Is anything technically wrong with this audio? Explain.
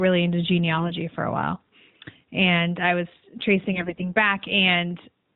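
Yes. Two short stretches turn hoarse and gargly, from 0.74 to 0.92 s and again from 3.72 to 4.08 s, while pitch and loudness roughly hold. These are AMR bit errors. On a poor radio link, a sizeable share of the less protected bits in each codec frame arrived flipped, possibly around 7 percent, while the check on the important bits still passed. The decoder therefore misplaced its excitation pulses and used wrong fine gain, pitch and spectral values, which produces the scratchy texture. The second burst lasts about twice as long as the first. The clip is band-limited to 4 kHz and carries only a light coded quality, which fits AMR narrowband at its 12.2 kbps mode.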